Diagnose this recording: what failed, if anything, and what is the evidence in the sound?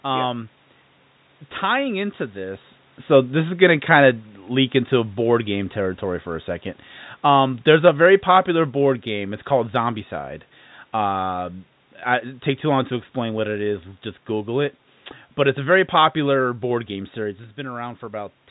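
The call processing's automatic gain control judged the input too loud, or its background noise too strong, and lowered its gain gradually. From 1.63 s to 12.93 s the speech sinks by about 5 dB, and the room noise underneath sinks with it. That shared drop is what separates an automatic gain fault from a talker moving away. The talker's own change of position is around 2.5 s, while the gain keeps easing down until almost 13 s.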